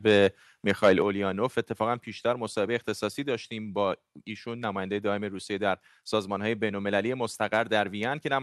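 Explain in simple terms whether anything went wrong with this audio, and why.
Between 0.69 and 0.93 s the loudest part of the speech turns harsh and crackly. This is microphone overload: the input level was likely set too high, so the tops of the biggest peaks were chopped off. Unlike general call-quality fuzz, it appears only on those loudest moments.

At 1.02 s the speech and the background noise both drop to a lower level at once, in a single step. This is the microphone volume being stepped down, likely by the call software reacting to the distortion just before. A speaker simply talking more quietly would not make the background drop at the same instant.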